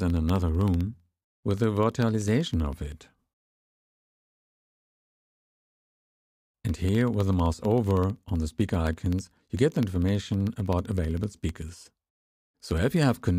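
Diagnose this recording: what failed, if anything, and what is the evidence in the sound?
Periodic USB or driver dropouts at the driver or buffer stage: a recurring stall drops a tiny fraction of a millisecond of audio, filled with silence, every 64 ms from 0.10 s to 13.29 s. Around two hundred evenly spaced ticks sound through the signal.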